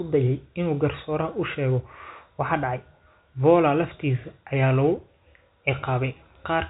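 No technical faults present.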